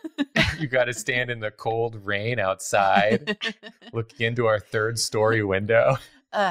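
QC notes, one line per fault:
Throughout: noise suppressor applied to music or sounds. A speech-tuned suppressor stayed active over the whole clip. It reads steady tones, ambience and tails as noise. Gain swings by roughly 10 dB, so the sound pumps and thins between attacks.
0.00–0.36 s, 1.29–1.63 s, 1.89–2.09 s, 3.54–4.21 s, 6.03–6.33 s: sound cut by the noise suppressor. In each span the suppressor misjudged sustained material as noise. Level sinks by up to about 9 dB. Held parts and decays fall away early while sharper onsets pass.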